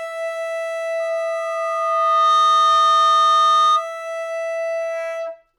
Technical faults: loudspeaker feedback squeal

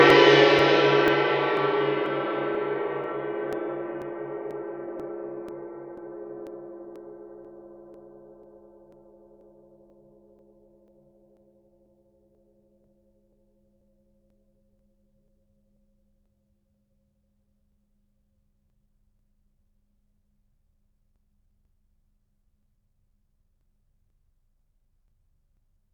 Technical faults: periodic USB or driver dropouts

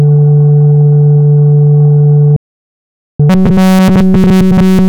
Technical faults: audio dropout to silence; robotic sound from repeated short buffers

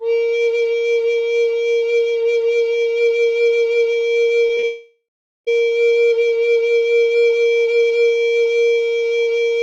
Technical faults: short concealed packet loss; long network dropout

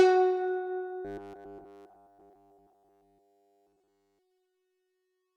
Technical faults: robotic sound from repeated short buffers

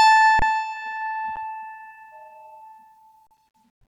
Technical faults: underrun with held sample

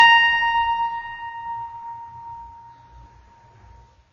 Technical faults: low-bitrate audio saved at a high bitrate

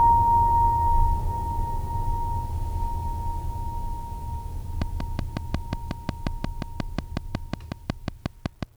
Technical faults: train of clicks

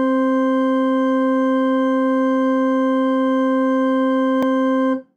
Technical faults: block of digital silence

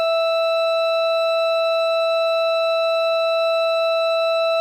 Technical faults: MP3 compression

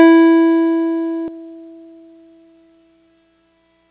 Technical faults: skip ahead; jitter buffer speed-up

